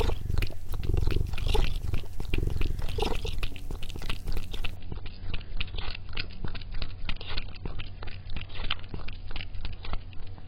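At 4.76 s the everyday sound abruptly drops in quality and stays degraded until the end at 10.48 s. This is an adaptive stream at a lower bitrate. The connection slowed, so the player switched to a cheaper encoding of the same audio. The sound suggests a step from about 96 kbit/s down to about 16 kbit/s AAC. Nothing remains above 5.2 kHz, so the top end is gone. Codec artefacts increase. There is no gap at the switch.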